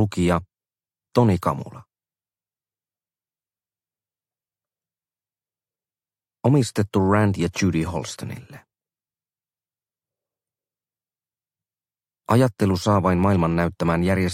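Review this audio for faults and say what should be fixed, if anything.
No faults found; nothing needs fixing.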